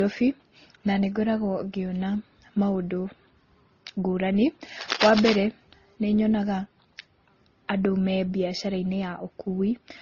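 From start to finish the speech sounds dull, with nothing above 6.8 kHz, and two layers of artefacts are heard together, stacked on each other. This points to transcoding between lossy codecs, likely a low-rate MP3 of around 24 kbit/s later re-encoded as Opus at a similar rate. The second encoder wasted its small budget on the first one's damage, and the lower cut-off stayed.

From 4.79 to 5.37 s a dense, irregular scratching and rustling sits over the speech, loud enough to compete with it, sitting only a little below its level. The bursts are uneven and crackly rather than a steady hiss. This is cable scratch noise, likely from a worn cable, connector or control being moved so that its contact resistance jumped around rapidly for that half second.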